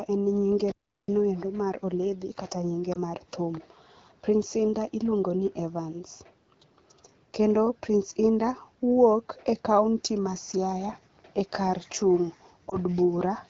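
At 0.72 s the speech cuts out abruptly and stays silent until 1.08 s, a gap of about 0.37 s, before carrying on. This is a playback stall, likely caused by the player running short of buffered data or its output thread being held up. On a waveform it appears as a flat line with hard edges on both sides. A spectrogram shows a clean vertical band of blank time across all frequencies, with no fade in or out.

From 2.93 to 2.99 s, and again from 12.69 to 12.77 s, a brief warble or dip passes through the speech. These are lost AMR speech frames, a single 20 ms frame each time. The decoder fills the hole by repeating its last good pitch and vocal-tract settings at reduced gain, then takes a moment to settle. The waveform shows a small amplitude sag. On the spectrogram, the harmonics smear into a short, slightly blurred patch. The wideband coding itself stays clear, which fits the 12.65 kbit/s mode.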